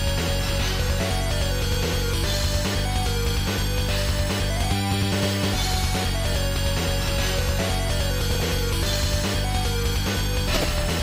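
DAB burbling breaks in three times: 6.32 to 6.37 s, 8.26 to 8.43 s, and 10.54 to 10.64 s. Weak reception lets bit errors, roughly 0.15 to 0.2 percent, slip past error correction. Wrong samples put short blips of noise in single sub-bands over the sound.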